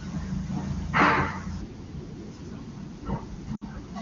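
A speech clip carried over AMR wideband (HD Voice) has lost AMR speech frames from 3.56 to 3.64 s. The decoder concealed the gap, about 60 ms and consistent with three consecutive 20 ms frames, by repeating the last good parameters with falling gain, so the sound drops to near silence within two frames.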